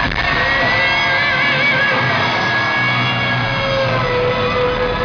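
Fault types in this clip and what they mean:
No technical faults are audible.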